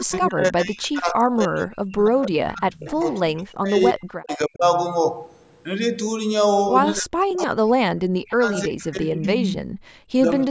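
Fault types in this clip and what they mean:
Speech suppressed in double talk: the speech dips by up to about 40 dB, most of the first 4.6 s and again 6.99–9.68 s, likely from an echo canceller ducking during overlapping talk.
Echo leak: delayed copies trail the speech by about 0.3 s, around 10 to 25 dB down, likely loudspeaker echo the canceller failed to fully remove.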